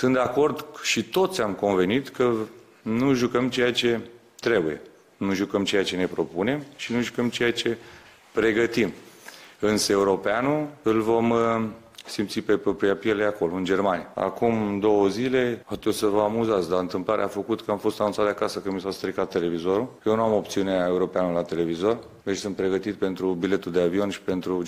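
No technical faults can be heard anywhere in the clip. Nothing interrupts or degrades the sound at any point.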